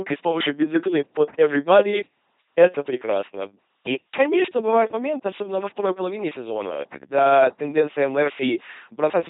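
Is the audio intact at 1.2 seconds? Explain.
No. At 1.2 seconds the speech is passing through an LPC-10 vocoder, and that damage runs through the whole clip. The sound is rebuilt from a short all-pole filter. Each instant is fed either a buzzy pulse train or noise, never a mix. The result is a heavily mechanical, robotic voice with buzz or hiss where voicing is misjudged. Nothing remains above 3.9 kHz. The coarseness fits a 2.4 kbit/s rate.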